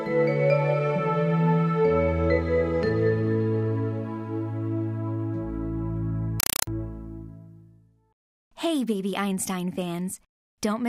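Between 6.40 and 6.67 s, a Dolby Digital (AC-3) bitstream reaches the output undecoded, a compressed stream played as audio. Each frame becomes a 4 ms burst of harsh noise followed by silent padding, repeating 31.25 times a second, replacing the audio with loud, chattering static.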